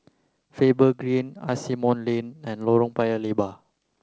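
No technical faults can be heard in this speech, carried over G.722 wideband telephone coding at 64 kbit/s.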